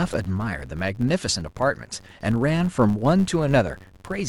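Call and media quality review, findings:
Filter restarted on every block, whole clip: steady buzz near 93.8 Hz under the speech, louder on loud syllables, fading in pauses. Probable component: block-based filter stage losing its state, so each block starts from silence with a small transient. The rate fits a 512-sample buffer at 48 kHz. Spectrogram: evenly spaced vertical lines, harmonics at multiples of 93.8 Hz. Waveform: periodic step at each block boundary.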